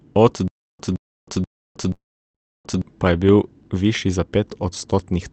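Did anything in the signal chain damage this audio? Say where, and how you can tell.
Yes. Playback buffer: a stutter with silent gaps from 0.48 to 2.82 s, a 0.17 s burst replaying four times every 0.48 s with 0.32 s of silence between. Those sections are lost, likely from repeated stream stalls.

Network and call processing: a call audio freeze from 1.93 to 2.38 s fills 0.41 s, mostly silent for about 0.35 s, then resumes without loss, likely because delayed packets drained the jitter buffer.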